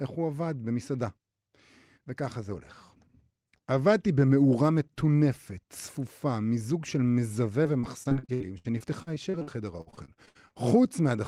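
From 7.63 to 10.53 s, repeated packet loss (robotic sound): 23 short dropouts, longest 67 ms, patched by extending prior audio, leaving choppy speech with roughly a quarter concealed.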